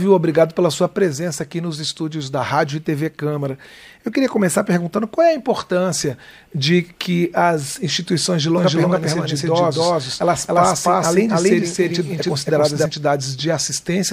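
From 8.58 s to 12.86 s the audio runs twice: a doubled audio track, with a second full-band copy trailing by roughly a third of a second at about the same level as the original. It most likely comes from the signal being picked up again through a slower path. Unlike an echo or reverb, the copy repeats only once, carries no decay or room colouring, and switches in and out abruptly at those two points.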